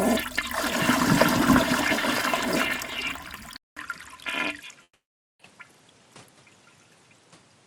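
Input switched to a poorer device, from 3.57 s to the end: a gap of about 0.2 s opens, and when the sound returns it is duller, with nothing above 11.8 kHz, and a new faint noise floor sits well beneath it. The overall level stays about the same. This points to the recorder likely changing to a different, band-limited microphone partway through, which brings its own tone and background noise.

Long network dropout, from 4.83 to 5.42 s: within that narrowed stretch the audio stops arriving. The last sound is briefly carried on as a fading buzz, then roughly 0.48 s of near silence follows. When the sound resumes at 5.42 s, about 0.56 s of audio is simply missing, with no catch-up. This is likely packet loss on the network path, with the receiver concealing the gap until it gave up.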